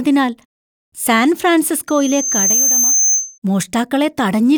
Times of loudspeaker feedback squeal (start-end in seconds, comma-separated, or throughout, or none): 1.87-3.38